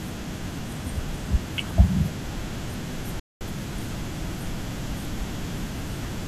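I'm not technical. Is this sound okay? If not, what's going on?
No. Bluetooth stall from 3.20 to 3.41 s: the speech cuts to silence, likely because interference delayed the wireless audio until the headphones ran out.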